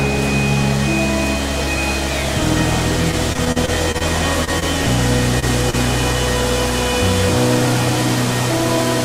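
The audio carries network delivery faults of three related kinds. From 3.11 to 4.03 s there is repeated packet loss with a robotic sound: eight separate holes, the longest 37 ms, about 100 ms of real sound lost in total and 171 ms of patched sound, so roughly a fifth of that stretch is synthetic. Because the receiver keeps extending the last sound into each hole and the next loss arrives soon after, the texture turns choppy rather than breaking at one point. That density sets it apart from the isolated events that follow. Short concealed packet loss occurs at 4.45 to 4.49 s, 4.60 to 4.63 s and 5.70 to 5.75 s. Each time about 20 ms of audio failed to arrive and was papered over with 19 to 26 ms of continued sound before blending back, which is heard as a brief smear or wobble where a small piece of the sound is actually gone. The event at 5.39 to 5.44 s is a short stall from a late packet. 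The jitter buffer ran dry, the last sound was stretched for 30 ms, and playback then resumed from the same point once the packet came in, leaving the delay 30 ms longer. Unlike the concealed losses, nothing is missing here. The sound is only held slightly too long, with a faint buzz or dip.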